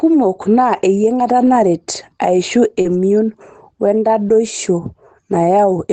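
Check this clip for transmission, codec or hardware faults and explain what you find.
Two kinds of packet-loss fault are audible in this speech, carried over a call path whose sound fits Opus at about 24 kbps with content ending near 8 kHz.

Lost packet rebuilt from error correction occurs at 1.41 to 1.47 s and again at 2.85 to 3.03 s. Packets were lost, but the packet following each one carried a low-bitrate copy. The decoder played that copy, so there is no gap. The rebuilt stretches last about 40 ms in the first event, which points to two packets, and about 100 ms in the second, which points to five. They sound coarser and noisier than the surrounding speech.

Short concealed packet loss runs from 2.81 to 2.87 s, just ahead of the second rebuilt stretch. About 40 ms of audio arrived too late to decode. The receiver extended the last sound for roughly 33 ms, following its pitch if voiced or using shaped noise if not, then crossfaded into the real signal. 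The result is a brief smear or wobble.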